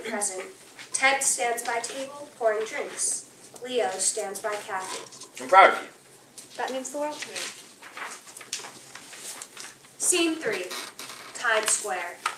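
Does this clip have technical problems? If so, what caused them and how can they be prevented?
Yes. Clock drift between sender and receiver runs through the whole clip. The sender's clock is roughly 5 percent fast, so the receiver's jitter buffer keeps overfilling. A waveform shows brief splice points where content goes missing. Adaptive resampling at the receiver prevents this.

Repeated timing corrections occur from 0.50 to 12.17 s. The receiver keeps cutting short pieces, always in the same direction, to keep pace at 105 percent speed. A spectrogram shows thin vertical seams at irregular spacing. Locking both ends to a shared reference clock avoids them.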